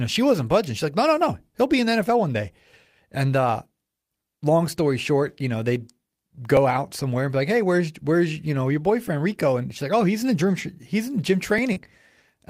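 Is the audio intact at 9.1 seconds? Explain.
No. At 9.08 s there is an overlapping chunks fault. The audio was handled in chunks of 2.5 s, and the next chunk started before the previous one had finished. About 6.5 ms of the speech is duplicated across that join. The doubled sliver is too short to hear as an echo. It comes through as a brief click or tiny stutter in the speech at that moment, which is a discontinuity where the signal should run smoothly.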